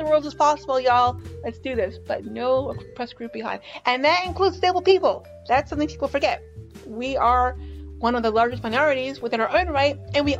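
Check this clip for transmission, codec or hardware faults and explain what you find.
No transmission, codec or hardware faults are audible anywhere in the clip.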